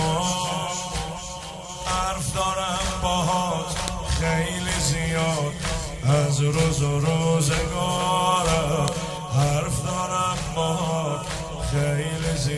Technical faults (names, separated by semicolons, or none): file header played as audio